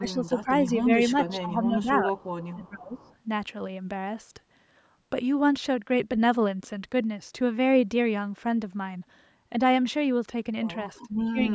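Where both ends seem to talk at once, the echo canceller likely could not tell the near talker from loudspeaker echo, so it pulled everything down: speech suppressed in double talk. The speech dips by up to about 15 dB from 0.00 to 0.51 s, briefly and more gently at 0.83 to 0.88 s, then by up to about 15 dB again from 1.11 to 2.11 s. It sinks deepest, by about 20 dB, from 2.52 to 3.09 s, and drops again from 11.08 s to the end.

Between those dips, a loudspeaker's echo likely slipped past the canceller and was sent back. This is an echo leak, heard as a faint copy of the speech trailing about 411 ms behind and sitting roughly 30 dB below it. It appears from 2.18 to 2.50 s and again from 2.93 to 3.14 s, where it overlaps the end of the deepest suppression.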